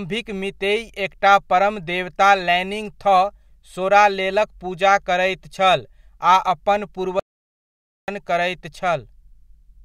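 At 7.20 s the speech cuts out and stays silent until 8.08 s, a gap of 885 ms, before resuming. This is a playback stall, likely caused by the player running short of data or its output thread being blocked.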